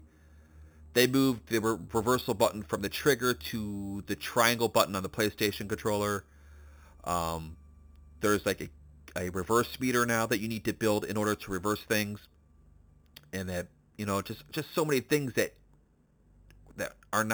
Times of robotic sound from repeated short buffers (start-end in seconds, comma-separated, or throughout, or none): none